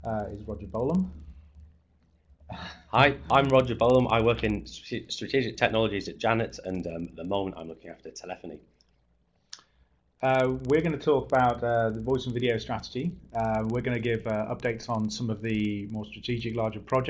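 Throughout, the resampler restarted on every 50 ms block, apparently converting 48 kHz to 16 kHz. The errors at each block edge come through as a 20 Hz ticking buzz whenever sound is present.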